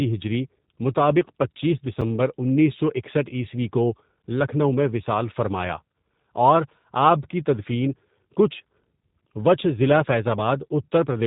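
Throughout the speech, the G.729 codec leaves plainly audible damage. The audio has been squeezed to about 8 kbit/s by a coder that models each 10 ms frame as a vocal tract filter, a pitch predictor and a handful of pulses, then resynthesises the result. Everything above 4 kHz is missing, and the voice has a rough, slightly buzzy, synthetic grain. What separates this from a plain low-pass filter or narrowband telephone line is that synthetic texture: a filter would only dull the sound, but here the waveform itself has been rebuilt.

At 2.01 s comes a block of digital silence lasting about 5 ms. For that instant the sound cuts out and then returns, with no fade at either edge, so the abrupt jumps produce a single sharp tick rather than an audible hole. A dropout that was merely quiet, or a codec concealing a lost frame, would smear or fade. This one cuts cleanly to nothing, most likely the mark of an output buffer that wasn't filled in time.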